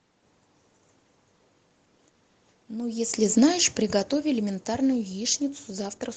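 Automatic gain falling in this speech clip from 2.92 to 5.46 s: judging the input too loud or its background noise too strong, the gain control eases it down about 10 dB, sinking speech and background together.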